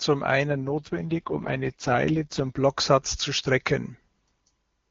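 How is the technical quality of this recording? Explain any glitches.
The recording has one glitch, an AMR rate drop from 0.48 s to 2.57 s. Before it, the HD Voice path sounds clean, which fits AMR-WB at its top rate of 23.85 kbit/s. During the drop, the speech turns rough, raspy and synthetic, but the bandwidth doesn't narrow and nothing cuts out. This is what happens when a weak radio link makes the network push the AMR codec down to a lower rate so that more bits go to error protection. The sound points to the lowest wideband modes, around 6.6 kbit/s, where the vocal tract model can no longer carry the voice cleanly. At 2.57 s the rate recovers and the speech is clear again.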